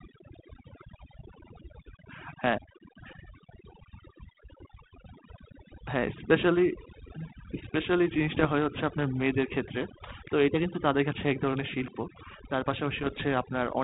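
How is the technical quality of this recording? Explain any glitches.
The recording has two problems: heavy-handed noise removal across the whole clip, and two short bursts of transmission damage near the end.

Overdone noise removal runs throughout the speech. The suppressor was set too aggressively, so individual frequency bands near its noise estimate are pulled almost to silence, taking the quieter parts of the voice with them. The background becomes near-silent with twinkling specks.

Bit errors on an ADPCM link occur from 8.34 to 8.47 s and from 12.98 to 13.24 s. The second, longer burst points to more damaged frames. The error rate sounds to be under one percent. Each flipped bit also corrupts the decoder's step size and predictor, so the damage rings on briefly as pops and rough bursts with momentary level jumps. The link itself carries G.726 at 32 kbit/s, with its usual 4 kHz band limit and only light coding grain.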